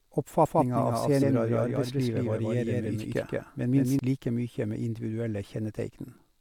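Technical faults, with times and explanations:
0.46–3.99 s, doubled audio track: likely a second, slower capture path mixed in, so an equally loud, dry full-band copy trails roughly 150 ms behind, stopping abruptly before "like mykje".
1.21 s, compressed frames skipped: a few compressed frames were missing or rejected by the decoder, so the speech jumps ahead by about 70 ms.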